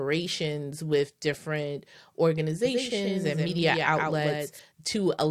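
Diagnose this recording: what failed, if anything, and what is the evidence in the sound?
From 2.65 s to 4.59 s the speech carries a dry, full-band echo trailing by roughly 150 ms, only about 5 dB quieter, which switches on and off abruptly. This doubled audio track is likely a second capture through a slower routing path mixed in.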